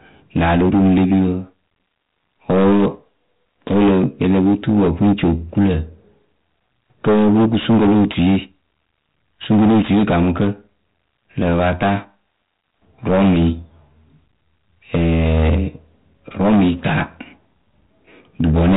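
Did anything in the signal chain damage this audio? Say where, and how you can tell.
Yes. Hard clipping runs through the whole clip. The speech is driven about 18 dB past what the converter or sample-format stage can hold, so its peaks are sheared flat. Roughly a tenth of samples sit on the rails, heard as harsh fuzz on every loud sound. The waveform shows flat-topped plateaus, and the spectrogram shows dense harmonic smear above each loud syllable.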